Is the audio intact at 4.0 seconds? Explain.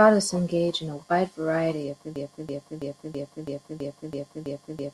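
No. A broken-record loop runs from 2.16 s, after "a wide variety of", to the end. A 0.33 s fragment repeats exactly, likely from a stalled player.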